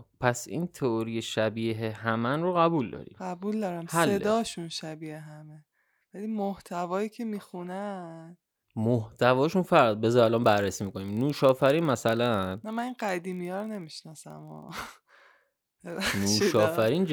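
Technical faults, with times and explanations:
10.36–17.12 s, block size mismatch (padded): zero-filled tails in each block make a steady 46.9 Hz buzz, fitting 1024-sample reads; regular rather than random, timbre intact, barely slowed.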